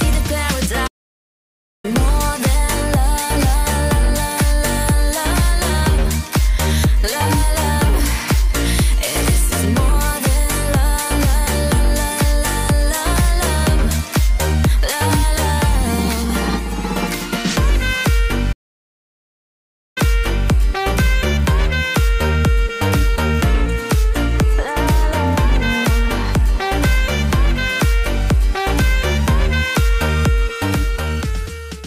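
Two playback stalls break the sound, at 0.87 to 1.85 s and 18.52 to 19.98 s. The player likely ran short of data. Output goes silent, then resumes.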